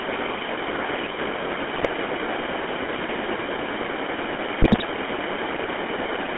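Throughout, the speech carries GSM full-rate codec damage: the excitation is rebuilt from sparse, regularly spaced pulses driving a vocal-tract model, giving a plainly audible buzzy, gravelly roughness. The line band runs from about 250 Hz to 3.4 kHz, which fits the 13 kbps full-rate coder.

GSM bit errors break in from 1.74 to 1.87 s and again from 4.62 to 4.85 s. Corrupted filter, pitch and gain values distort the spectrum and spike the level frame by frame, producing squawks, pops and gargling. The second burst is longer, spanning more frames.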